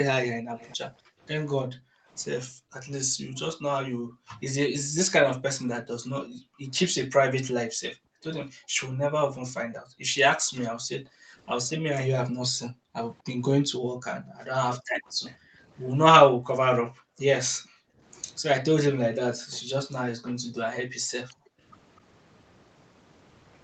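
Echo leak at 0.58–0.76 s: a faint copy of the speech returns about a quarter-second late, roughly 248 ms behind, sitting around 25 dB below the direct sound. This is likely a loudspeaker on one side whose echo canceller did not fully remove what its microphone picked up, so the leftover was sent back down the line. It comes through as a brief, ghostly repeat.

Background gated by the echo canceller from 0.91 to 4.96 s, then at 6.26–6.63 s, 7.71–11.35 s, 12.49–12.95 s, 13.86–18.01 s and 19.35–21.61 s: while its loudspeaker was playing, the canceller pushed the microphone down hard, by as much as about 40 dB. The room tone drops away in stretches of up to a couple of seconds, with shorter dips near half a second, and snaps back when the suppression releases.

Echo leak at 15.06–15.35 s, inside that longer gated stretch: the same faint delayed copy returns at the same 248 ms lag, again well below the speech. 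It is a short repeat trailing the original.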